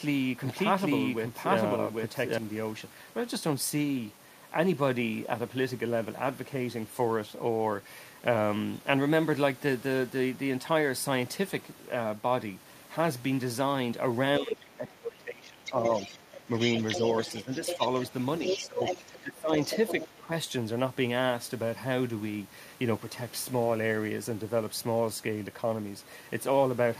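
Right from the start, and already running when the clip opens, there's a doubled audio track up to 2.38 s: a second full-band copy at about the same level trails by roughly 0.7 s, with no room colour, and it stops abruptly. Most likely it's a slow second capture path or a misaligned edit.

From 14.39 to 17.82 s, and again from 18.54 to 19.51 s, the speech gets suppressed in double talk. It dips by up to about 20 dB for around two seconds, then under a second, likely because the echo canceller couldn't tell the talker from loudspeaker echo. A shallow dip of about 5 dB follows at 20.2 to 20.31 s.

Overlapping that, the other side's voice leaks through, sitting only about 5 dB under the speech. There's a brief scrap at 14.5 to 14.65 s, then a longer stretch from 15.65 to 20.19 s, likely loudspeaker pickup the canceller didn't fully remove.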